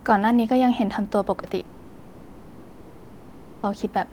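At 1.39 s the speech briefly smears for about 40 ms, and at 1.59 s a shorter wobble of about 20 ms follows. Both are short concealed packet loss. Small pieces of the call arrived too late for the decoder, so the receiver patched each gap by stretching the preceding sound, following its pitch or filling with shaped noise, before blending back into the real signal.

From 1.65 s to 3.65 s the sound gives way to a synthetic continuation lasting about two seconds, an extended buzzing or hissing tail that never drops to silence before the real audio returns. This is most likely a long network dropout. For almost the whole stretch nothing was delivered, so the receiver kept generating substitute sound from the last material it had. The original two seconds are gone, and the speech resumes later with that portion missing.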